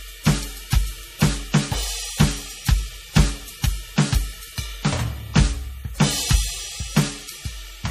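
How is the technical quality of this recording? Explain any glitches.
Technical quality is poor, with audible compression damage throughout. MP3 compression is the likely cause. Treble stops near 15.1 kHz, and the music sounds watery and swirly, which fits a low bitrate around 40 kbps.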